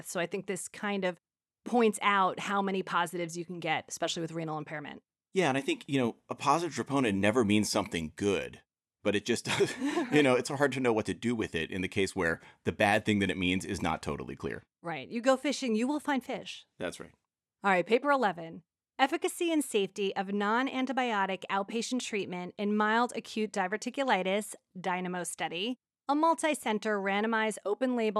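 No technical faults can be heard anywhere in this recording.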